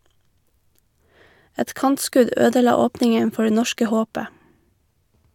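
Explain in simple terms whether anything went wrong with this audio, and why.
Nothing went wrong here; the speech comes across steady and intact, with no dropouts, glitches or odd noises anywhere in it.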